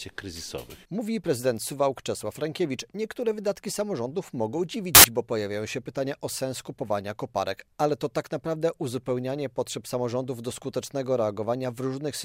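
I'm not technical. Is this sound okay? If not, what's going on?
No. From about 4.95 to 5.04 seconds there is a short, harsh blast of loud hiss, like radio static, that starts and stops abruptly. This is file tags played as audio: the cover picture stored inside the file was read out as if it were sound, and because picture data looks random, it comes out as pure, very loud noise. Unlike a click or a crackle, it's a solid block of static with hard edges.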